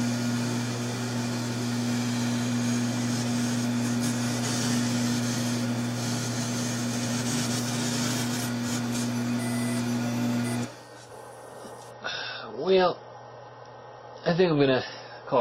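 The audio turns abruptly duller and more artefact-laden from 11.91 s to the end, with nothing above 5.8 kHz and no gap at the switch. This is an adaptive stream at a lower bitrate, consistent with a drop from 128 to 24 kbit/s MP3 after the connection slowed.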